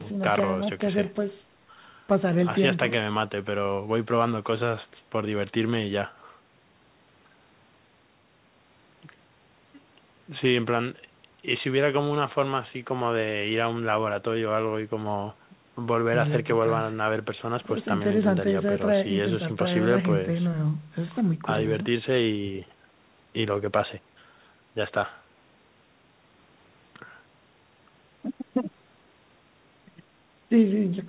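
Speech arriving over a G.711 mu-law call path, band-limited at about 4 kHz as that codec's narrowband coding dictates, with no technical faults to report.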